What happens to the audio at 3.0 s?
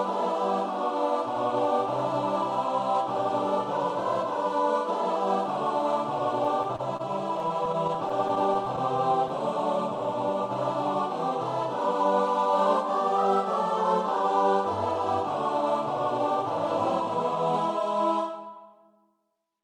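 Nothing goes wrong at 3.0 s; the audio plays through that moment intact, with no dropout, glitch or other fault.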